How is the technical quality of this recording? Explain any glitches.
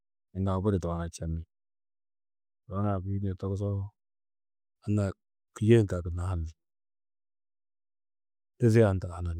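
Listening closely to the recording, nothing in it stood out as a technical problem.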